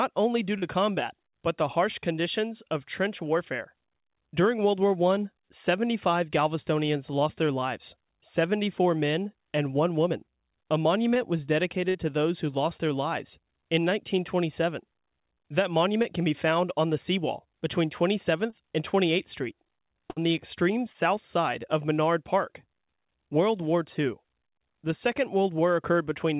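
Short concealed packet loss in this speech clip, at 0.58 to 0.64 s, 11.14 to 11.17 s, 16.02 to 16.06 s (just before "can be found on"), 18.50 to 18.54 s and 20.92 to 20.96 s (between "the extreme" and "side of"), leaves brief smears or wobbles where roughly 20 to 40 ms of lost audio was patched by extending the preceding sound. A burst of packet loss at 11.89 to 11.96 s and 20.10 to 20.18 s (just before "the extreme") removes about 60 ms each time, bridged by a fading held buzz or hiss before the speech resumes further on. Everything passes through a telephone-style call path with nothing above 4 kHz, which fits G.711 A-law at 64 kbps.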